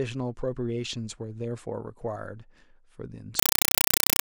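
Compressed stream played as audio from 3.39 s to the end of the speech: undecoded AC-3 data, fitting a 256 kbps stream, bursts as loud static 5.33 ms long, 31.25 times per second.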